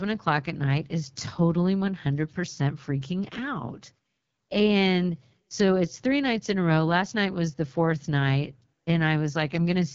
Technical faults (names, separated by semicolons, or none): AMR wideband (HD Voice) codec